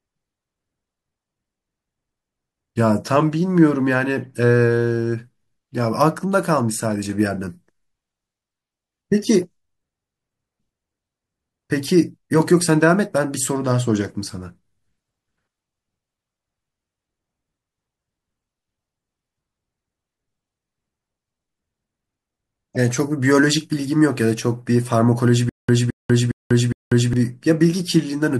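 Corrupt frame decoded at 4.22 s and again from 22.75 to 22.77 s: a few compressed frames arrived with damaged bits and were decoded anyway, so misread gains and codes scatter energy into the wrong frequencies, heard as a brief chirpy burst of noise each time.

Stutter with silent gaps from 25.49 to 27.13 s: a 219 ms fragment of the speech repeats four times, each followed by 192 ms of digital silence, recurring every 410 ms. This is likely a stalled stream replaying its last buffered piece at each retry, and the speech that belonged in that span is lost.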